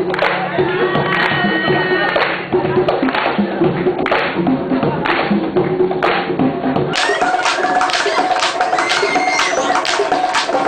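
From 6.93 s to the end, the audio suddenly races at twice its proper speed and jumps a full octave higher, 12 semitones up. This is the audio read two samples at a time: the decoder treated each pair of samples as a single frame, as if the data held two channels or wider samples, so it consumed the stream at double rate.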